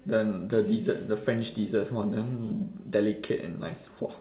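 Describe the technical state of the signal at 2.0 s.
At 2.0 s the speech is intact, with no fault present, only the narrow telephone-band sound of the call path, which carries nothing above 4 kHz.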